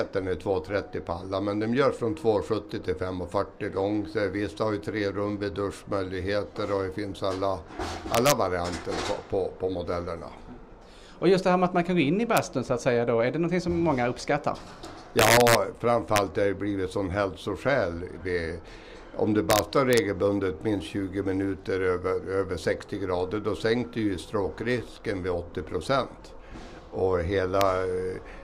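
Integer overflow cracks appear at 8.15 to 8.32 s, 12.37 s, 15.19 to 15.55 s, 16.16 s, 19.50 to 19.98 s and 27.61 s. Loud peaks exceed the integer limit, by about 3, 0, 4, 2, 2 and 0 dB respectively, and wrap to the opposite extreme instead of being held, producing violent, harsh snaps. On the waveform, peaks jump instantly from the top of the swing to the bottom. A spectrogram shows sharp, full-height vertical broadband stripes.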